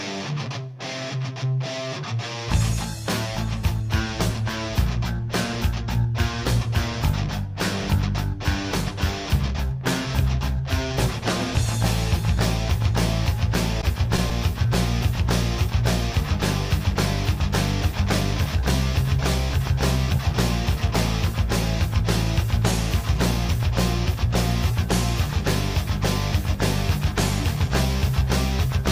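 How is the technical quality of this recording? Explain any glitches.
The recording has one glitch, a cluster of scattered short gaps between 13.81 and 14.67 s. About four packets went missing or arrived late. The receiver bridged each hole by extending the preceding sound, roughly 50 ms of filled audio in total, none longer than about 15 ms. The result is brief ticks and small smears, with the sound staying clear around them.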